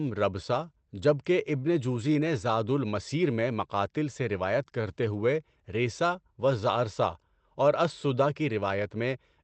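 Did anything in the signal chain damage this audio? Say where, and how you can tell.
Yes. Clock drift between sender and receiver hits the jitter buffer. The sender runs roughly 1.5% slow, so the buffer keeps draining, leaving tiny irregular seams in the waveform.

Repeated timing corrections run from 0.08 to 8.61 s. The receiver repeats short pieces, slowing the speech to 98% and adding roughly 150 ms, seen as unevenly spaced duplicated slivers.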